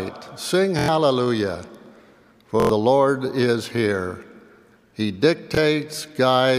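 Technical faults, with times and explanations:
0.79–0.88 s, 2.60–2.69 s and 5.55–5.57 s: repeated buffer. The first two are quick stutters, where a slice of about 23 ms sounds five times in a row with a hard join at each repeat, giving a short buzzy rattle. At 5.55 s the slice plays only twice, a single click-like hiccup. New audio arrived late, so the device replayed its last block, which fits a 1024-sample buffer. About a tenth of a second of sound is lost at each of the first two.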